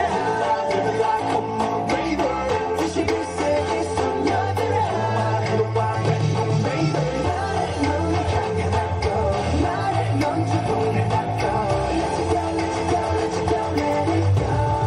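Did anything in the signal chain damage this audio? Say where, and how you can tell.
No, nothing in the signal chain audibly damaged this audio. I can't point to any stage where a fault shows up.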